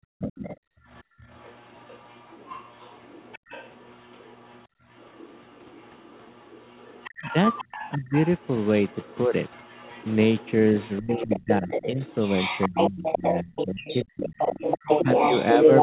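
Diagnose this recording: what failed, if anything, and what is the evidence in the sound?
Background gated by the echo canceller (call processing): room noise drops out within 0.00–1.18 s, by about 35 dB, and at 4.69–4.80 s, by about 21 dB. The waveform shows flat-floored notches.

Other side's voice leaking through, likely residual echo the canceller missed, runs from 0.19 s to the end, only a few dB below the talker. The spectrogram shows a second, overlapping harmonic pattern.

Speech suppressed in double talk, likely the canceller ducking both voices, appears at 7.95–8.14, 11.00–11.99, 12.68–14.38 and 15.04–15.09 s. These are envelope dips of about 5 to 30 dB.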